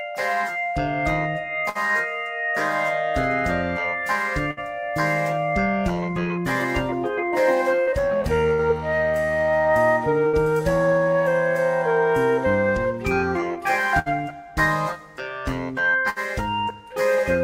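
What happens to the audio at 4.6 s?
A burst of packet loss hits between 4.51 and 4.60 s: several packets never arrived in time, so the receiver stretched the last sound for about 59 ms, fading it down, and then resumed with roughly 60 ms of audio simply gone.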